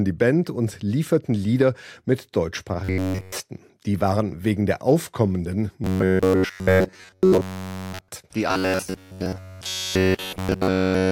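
Robotic sound from repeated short buffers appears at 2.84 to 3.37 s, again from 5.84 to 8.09 s, and from 8.51 s to the end at 11.11 s. The speech becomes a rigid, metallic buzz pitched at 93.8 Hz, with essentially all of the sound replaced. The likely cause is starved playback looping a fragment of about 10.7 ms while the real audio is skipped, so the repetition rate imposes that fixed pitch.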